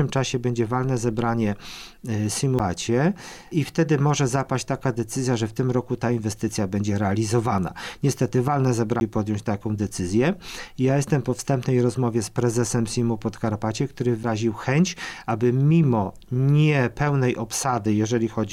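At 2.59 s, 9.00 s and 14.23 s there is a CD skip. Each time, the laser loses its track on the disc's spiral, the player mutes for roughly 10 ms or less, and playback resumes from a different turn of the spiral. Each skip is heard as a short tick followed by an abrupt jump in the material. On a waveform, each appears as a brief flat gap with mismatched edges. On a spectrogram, each shows as a thin vertical line with a sudden change in content on either side.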